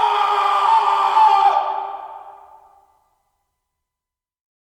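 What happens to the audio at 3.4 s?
Nothing goes wrong at 3.4 s; the audio plays through that moment intact, with no dropout, click or distortion.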